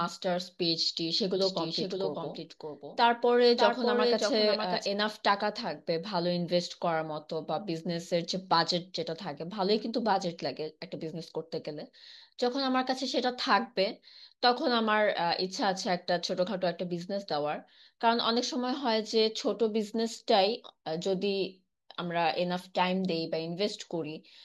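From 1.42 to 4.86 s there's a doubled audio track: a slightly quieter, dry copy trails about 0.7 s behind, likely a slower capture path.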